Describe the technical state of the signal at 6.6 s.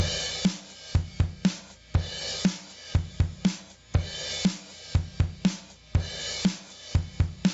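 At 6.6 s, as throughout the clip, there is gain pumping: the gain swings by around 20 dB, pulled down on each loud sound, likely from excessive gain feeding a fast limiter. Unlike a noise gate, it never cuts the background to silence.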